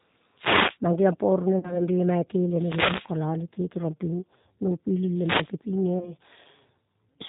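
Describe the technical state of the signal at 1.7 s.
At 1.7 s the speech sits inside a VoIP packet loss concealed by the speech codec, from 1.59 to 1.82 s. About 40 ms went missing, which fits two lost packets. The decoder stretched its last pitch and filter into a fading buzzy tone or coloured noise, and the voice stays weak or distorted afterwards. Underneath, the G.729 codec at 8 kbit/s plainly roughens the speech and cuts everything above 4 kHz.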